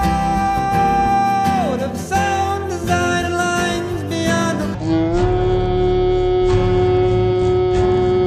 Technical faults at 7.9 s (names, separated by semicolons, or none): section at the wrong speed